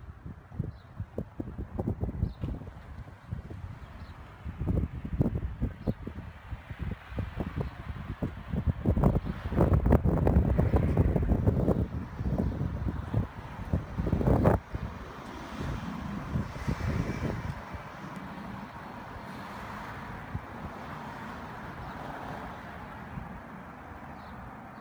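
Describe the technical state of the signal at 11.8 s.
At 11.8 s the signal carries sample clock jitter, present throughout the recording rather than confined to this moment. The converter's timing wanders by roughly 7 microseconds RMS, so each sample is captured slightly off its ideal instant. Because the resulting error scales with how steeply the waveform is changing, it surfaces as a grainy hiss riding on loud and bright passages, sitting around 35 dB below the signal and dropping away during quiet stretches.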